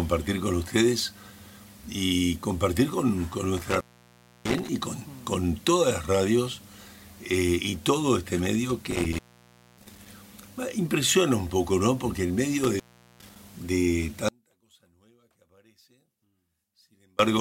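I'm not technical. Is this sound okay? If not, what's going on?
No. Three times the sound cuts out with a crackle, at 3.57–4.69 s, 8.91–10.06 s and 12.64–13.36 s. That's an intermittent contact, a loose plug or cable briefly disconnecting.

Then, from 14.29 to 17.19 s, the sound almost disappears. The likely cause is one channel inverted, with the two stereo sides cancelling each other out.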